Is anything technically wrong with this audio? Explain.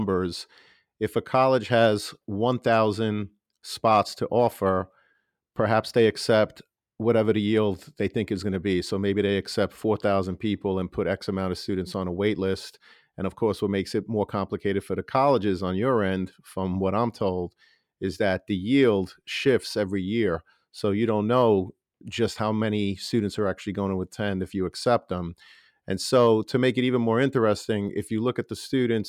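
No, nothing is technically wrong with this audio.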